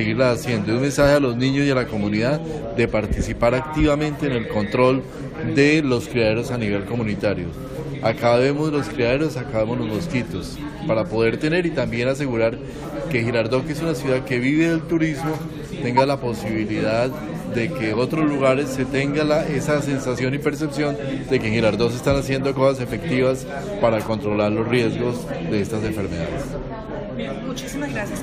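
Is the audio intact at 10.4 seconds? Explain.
Yes, the audio is intact at 10.4 seconds, with no dropout, click, distortion or other fault at that point.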